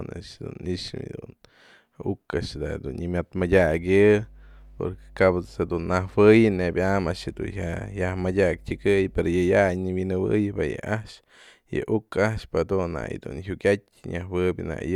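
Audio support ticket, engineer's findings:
Mains hum, 3.39 s to 9.72 s. Steady low tone at 50 Hz with low harmonics, sitting well below the speech. Probable component: ground loop or nearby transformer. Mechanism: power-line current coupling into the signal path. Check grounding and cable routing near supplies.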